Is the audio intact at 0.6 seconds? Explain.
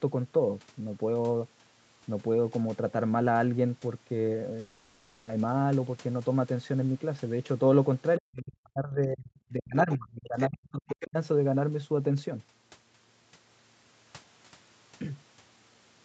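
Yes, the audio is intact at 0.6 seconds, with the speech carried cleanly through the call path's normal band limit of about 8 kHz.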